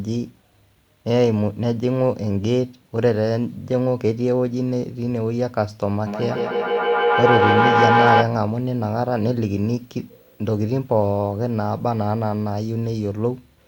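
Feedback howl runs from 6.06 to 8.37 s in this speech recording. Two devices sharing a room and call feed each other, so each loop trip gains level. The tone narrows to around 700 Hz, repeats roughly every 150 ms, and peaks about 4 dB above the speech. Video or display buzz follows from 8.60 to 12.98 s. A screen or its cable couples into the audio, producing a 59.94 Hz field-rate buzz with hash above it and a 15.7 kHz line-rate whine, all sitting low, somewhere near 35 dB under the signal.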